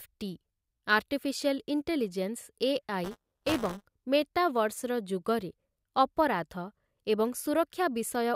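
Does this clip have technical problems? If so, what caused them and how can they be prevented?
Yes. From 3.04 to 3.84 s, just before "ମେଟାଭର୍ସର ଯୁଗରେ", a robotic 200 Hz rattle rides the speech: buffer tearing, where each roughly 5 ms buffer carries about a tenth stale audio from around 15 ms earlier. Prevent it by keeping writer and hardware pointers synchronised with adequate latency headroom.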